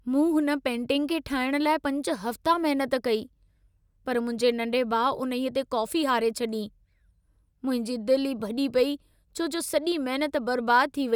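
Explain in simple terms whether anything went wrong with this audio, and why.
Nothing went wrong here; the speech comes through steadily, with no dropouts, glitches or odd noises anywhere along the way.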